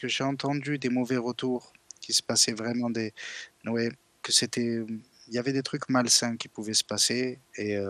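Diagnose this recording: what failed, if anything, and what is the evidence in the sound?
MP2 compression damage runs throughout this speech, plainly audible as dull highs with a gurgling, granular texture. The likely stage is the codec: starved of bits, fitting a rate near 80 kbps, Layer II drops upper sub-bands and coarsely quantises the rest.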